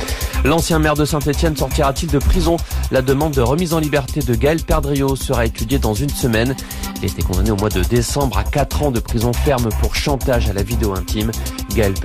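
From the start to 3.43 s, timecode bleed sits behind the sound: linear timecode from an adjacent track or cable has leaked in. It is a faint chirping warble, roughly 30 dB under the signal, flipping between pitches near 1 kHz and 2 kHz at a steady rhythm that fits 30-frame code. A hum or a single-frequency whine would hold one pitch. This one keeps switching between the two pitches in a square-wave pattern.

From 7.64 s to 10.14 s come periodic USB or driver dropouts. Every 0.5 s, some background task stalled the bus or audio driver, and a sliver of audio, around half a millisecond, was replaced with silence. There are roughly seven of them, heard as small regular ticks. Random clicks from damage or interference would be scattered. These arrive at an exact, even spacing, and each tick comes from a tiny gap in the audio, not from added noise.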